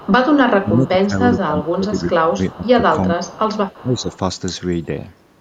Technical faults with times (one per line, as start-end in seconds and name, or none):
0.00-0.10 echo leak
0.60-2.83 speech suppressed in double talk
2.66-2.71 echo leak
3.15-3.38 speech suppressed in double talk
3.28-3.84 echo leak
3.82-4.10 speech suppressed in double talk